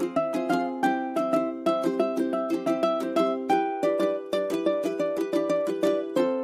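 No technical faults are audible.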